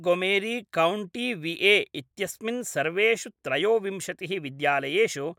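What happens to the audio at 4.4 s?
Nothing goes wrong at 4.4 s; the speech carries on intact through that moment, with no dropout, click or distortion.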